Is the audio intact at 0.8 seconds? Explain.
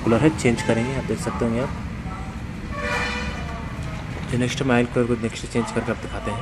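Yes, the audio is intact at 0.8 seconds, with no fault present at that moment.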